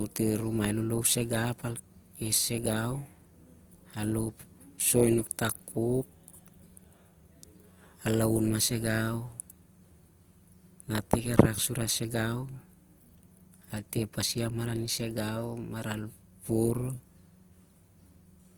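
From start to finish the speech has a grainy, rough texture, with tonal parts of the sound turning noisy. The damage is plainly audible, yet the top end stays open, reaching about 20.2 kHz. This is likely Opus compression in its music-style CELT mode. With too few bits, the encoder preserves each band's energy but fills the detail with folded or noise-like content, which fits a low bitrate near 24 kbps.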